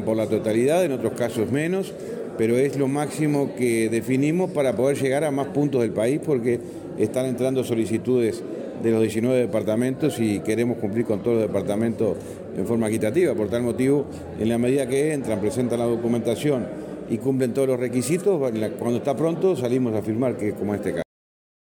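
At 21.02 s the sound has a cut-off end. The final buffers were never written out, so the audio stops mid-sound and falls straight to digital silence for the last 0.63 s. The waveform shows an abrupt vertical edge into a flat line, and the spectrogram goes blank with no decay tail.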